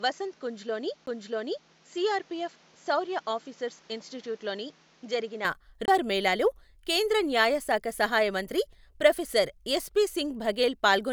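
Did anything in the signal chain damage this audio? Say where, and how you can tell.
Yes. At the capture end, the recording likely ran on a poorer input device for the first part, from 0.0 to 5.45 s, before the better one took over. During that stretch nothing is present above 7.6 kHz, the level sits about 5 dB lower, and a fresh noise floor about 30 dB under the speech appears. There is no gap at the changeover, just an abrupt return to full bandwidth and the quieter background, which points to an input switched to a poorer device.

The second problem sits at playback: a CD skip, occurring twice. At 1.06 s the output mutes for a few milliseconds, and from 5.85 to 5.88 s there is a mute of about 20 ms just before "మేళాలో కేంద్ర న్యాయ శాఖ". Each time the laser lost its track, the player briefly silenced the output and resumed on another turn of the spiral, so the speech jumps discontinuously rather than fading.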